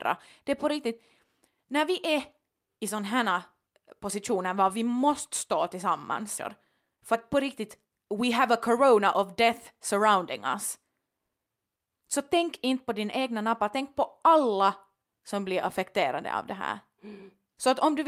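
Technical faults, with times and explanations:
6.37 s, skip ahead: about 0.7 s of speech was dropped, so playback jumps straight forward, splicing the two sides together with no gap.
6.81–9.00 s, jitter buffer speed-up: an overfull buffer was drained by trimming short pitch-period slices, roughly 0.3 s in all, so speech runs 111% fast at unchanged pitch before "of death surrounding us".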